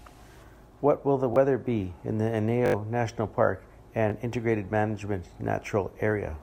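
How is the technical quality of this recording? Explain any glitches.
The speech is marred by four repeated buffer glitches, at 1.34–1.36 s, 2.66–2.74 s, 4.10–4.12 s and 5.34–5.36 s. Each time, new audio arrived late, so the playback device replayed its last block, which fits a 20 ms buffer. The repeats are twice at 1.34, 4.10 and 5.34 s, and five times at 2.66 s. Short ones sound like clicks, the longer one like a brief buzzy stutter. On a waveform, identical segments sit side by side with hard joins. A spectrogram shows vertical lines at each join.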